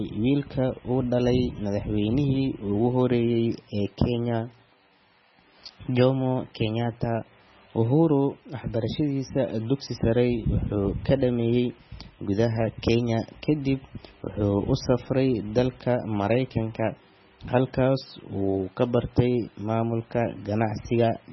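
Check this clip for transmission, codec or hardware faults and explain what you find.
One codec fault runs through the whole speech clip. MP3 compression, likely, from start to finish: the starved encoder cuts everything above 5.9 kHz and flickers weak frequency lines, giving heavy, watery, swirly dullness consistent with roughly 16 kbps.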